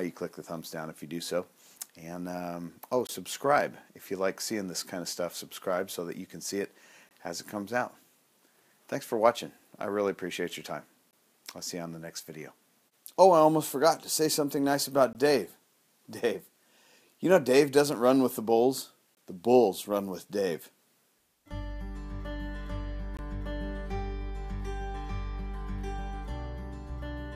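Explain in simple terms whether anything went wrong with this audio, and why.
The sound stops briefly six times, at 3.07, 7.09, 11.11, 15.13, 19.15 and 23.17 seconds. Each silence lasts 20 milliseconds and has sharp edges. This is a gap between chunks: the audio was handled in 4-second pieces, and a small stretch of silence was left at each join. It differs from a dropout because no sound goes missing. The audio picks up exactly where it paused, and the breaks come at a steady rhythm.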